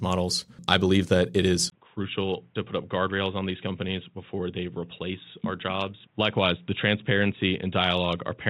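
At 1.7 s the sound drops out for about 20 ms and then returns duller and boxier, with nothing above 3.8 kHz, a level a few decibels lower and a faint new background hiss, all lasting to the end. The likely cause is that the input switched to a poorer device. A filter or codec bandwidth drop would narrow the band alone, but here the tone, level and noise floor change together after a gap.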